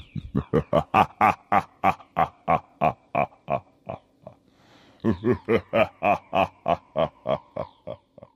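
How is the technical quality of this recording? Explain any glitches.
No audible glitches or faults.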